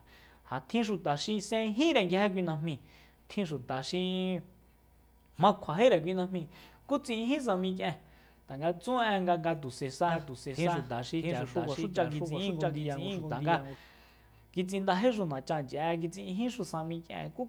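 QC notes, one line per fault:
10.08–13.76 s doubled audio track: a dry full-band copy trails about 0.7 s behind, roughly 5 dB lower, and starts and stops abruptly, likely from a second, out-of-step capture path.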